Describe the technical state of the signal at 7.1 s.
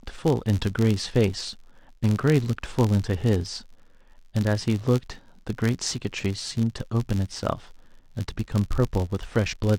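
At 7.1 s the processing chain is suffering from a filter restarted on every block, a fault that runs through the whole clip rather than just this moment. The filter discards its memory at each block boundary and starts again from silence, so every block opens with a small transient. In this speech the result is a steady buzz at about 86 Hz, which fits a 512-sample block, and it rises and falls with the level of the speech.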